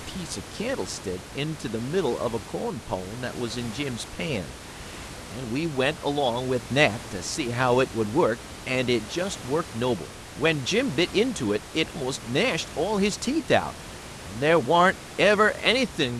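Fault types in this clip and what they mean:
Nothing in this speech audio points to a system fault.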